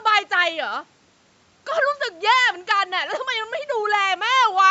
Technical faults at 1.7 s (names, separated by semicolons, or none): none